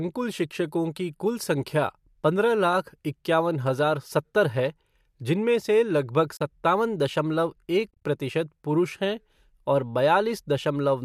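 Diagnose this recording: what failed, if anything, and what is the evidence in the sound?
The failure is AAC frame loss with muting, at the codec decoding stage after frames went missing in transport. At 6.37 to 6.40 s the speech drops into a short soft-edged hole of about 40 ms, fading out and back in. From 7.91 to 8.03 s several smaller gaps, adding up to about 100 ms, are spread across roughly 140 ms, none much longer than 30 ms. The lost frames' spectrum was zeroed and the overlapping windows smoothed the edges. The short frame spacing fits a likely low-delay AAC stream.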